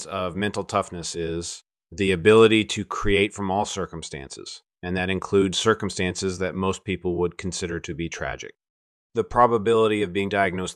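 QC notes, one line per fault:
No faults heard in the speech clip; nothing to log.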